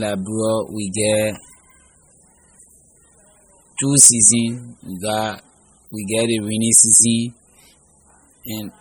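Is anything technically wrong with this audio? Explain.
Yes. MP3 compression damage runs through the whole speech clip, likely from a low-bitrate encode around 32 kbps. Starved of bits, the encoder drops weak frequency lines that flicker between frames, giving a heavy watery, swirling texture and chirpy sibilants, with nothing above 21.1 kHz.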